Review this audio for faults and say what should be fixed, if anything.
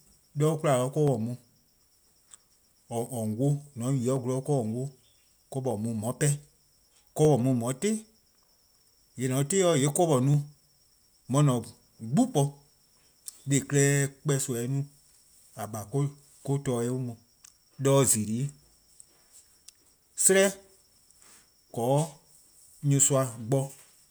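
Two devices in the chain are likely running on separate clocks that disagree by a couple of hundred parts per million, so the buffer between them drifts until a small block of roughly fifteen samples is dropped or repeated. These clock drift buffer slips are heard as a regular click in the speech every 1.54 s, about fifteen times from 1.08 s to 22.69 s. To prevent it, lock both devices to a shared clock or add asynchronous sample-rate conversion between them.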